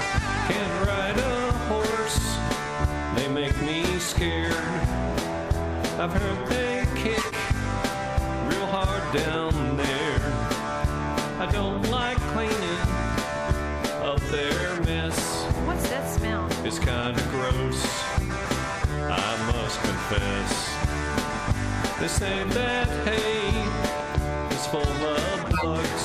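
At 7.14 s a corrupt frame decoded for about 0.2 s, and again at 25.53 s for about 0.13 s. Damaged bits in the compressed stream were decoded as valid, so misread gains or codes placed energy at frequencies the sound never had. The lengths point to a few consecutive frames the first time and a couple the second. Unlike a dropout or a single click, each event is a short stretch of wrong spectral content that lasts about as long as the damaged frames.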